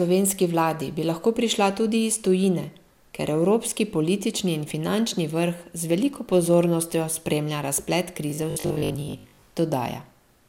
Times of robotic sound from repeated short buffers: 8.30-9.48

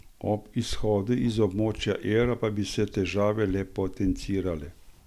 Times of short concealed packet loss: none

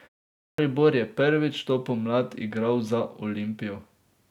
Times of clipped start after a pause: 0.36-0.58

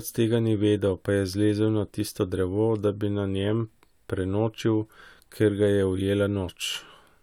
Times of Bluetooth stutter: none

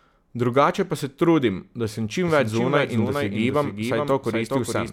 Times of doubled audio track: 2.28-4.92

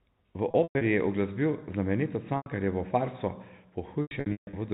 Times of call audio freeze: none

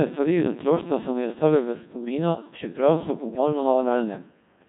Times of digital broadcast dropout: none

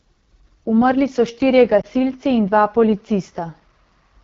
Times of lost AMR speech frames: 1.81-1.86

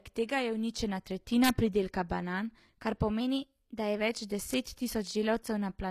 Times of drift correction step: 3.20-4.00

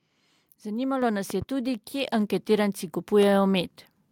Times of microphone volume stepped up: 1.02, 2.04

